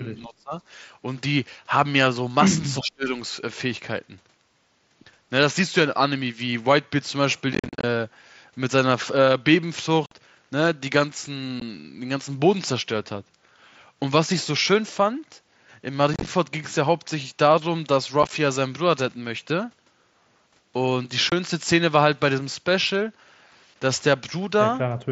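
At 0.24 to 0.53 s and again at 2.8 to 3.11 s the speech sinks by about 25 dB, likely speech suppressed in double talk by an echo canceller reacting to simultaneous talk.

Short, abrupt holes follow at 7.53 to 7.84 s (scattered gaps, longest 45 ms), 10.06 to 10.12 s, 11.6 s, 16.14 to 16.27 s, 18.23 to 18.31 s and 21.30 to 21.32 s. These are unconcealed Bluetooth headset packet loss: missing headset packets were left as silence or an idle pattern rather than patched over.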